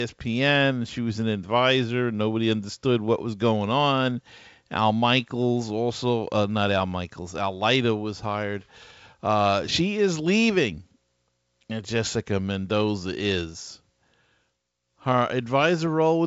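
No technical faults can be heard in this speech, carried over G.722 wideband telephone coding at 64 kbit/s with nothing above about 7.7 kHz.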